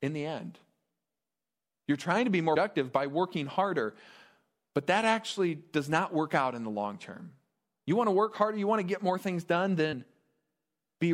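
Compressed frames skipped at 2.55 s and 9.92 s in this speech recording make the audio jump forward. At 2.55 s about 150 ms is lost, which fits roughly seven frames of about 26 ms each. At 9.92 s about 50 ms, a couple of frames, disappears. The frames were missing from the file or rejected by the decoder as damaged. Because adjacent frames overlap, each join comes through as a short smeared blip rather than a sharp click.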